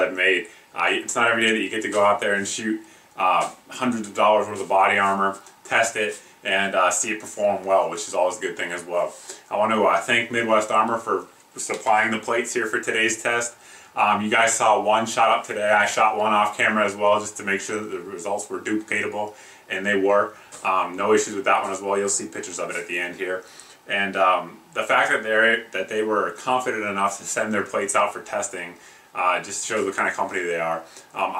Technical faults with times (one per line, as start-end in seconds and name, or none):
none